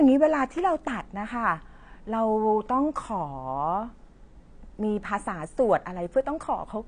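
Speech, likely passed through low-bitrate AAC compression throughout, which fits a rate around 32 kbps: the encoder discards everything above about 9.8 kHz and quantises the remaining spectrum coarsely, so the audio sounds dull and smeared, with plainly audible warbling and fizz on sibilants.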